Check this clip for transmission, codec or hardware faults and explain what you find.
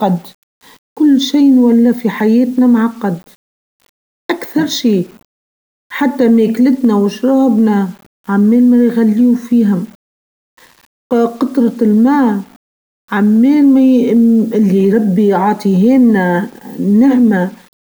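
There's one problem, and it runs through the whole speech clip: a grainy, gritty distortion that tracks the level, with the noise floor only about 35 dB under the signal. The likely cause is low bit depth without dither, roughly 7-bit rounding, so quieter passages and tails coarsen and sputter.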